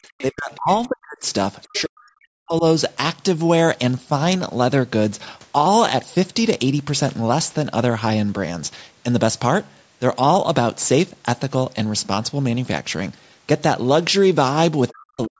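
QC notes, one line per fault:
0.18–0.24 s and 1.62–1.81 s, other side's voice leaking through. A second, fainter voice breaks into the recording in two brief scraps, the second one longer. It sits roughly 20 dB below the main talker. The likely cause is the far side playing over a loudspeaker and reaching the microphone, with the echo canceller failing to remove all of it.
0.3–0.7 s, 0.87–1.26 s, 1.66–2.64 s and 14.9–15.39 s, speech suppressed in double talk. The talker's level suddenly collapses, dropping by some 30 to 40 dB at its deepest, so parts of the speech fade or vanish. The third dip overlaps the second leak and runs longest. The likely cause is both sides talking at once, with the echo canceller unable to separate the talker from the echo and turning everything down together.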